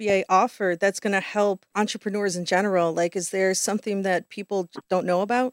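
No technical fault can be heard anywhere in the audio, with the signal staying continuous and intact throughout.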